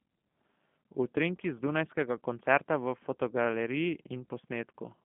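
From start to finish the speech carries the sound of the G.729 codec, which fits an 8 kbit/s stream. It rebuilds each 10 ms frame from a vocal tract filter, a pitch predictor and a few pulses, so voices come out rough and faintly synthetic. Nothing survives above 3.5 kHz, leaving a narrow 150 Hz to 3.4 kHz telephone band.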